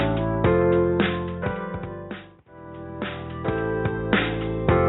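Nothing stands out here; the audio runs along without any dropouts, glitches, or other technical trouble that a listener would catch.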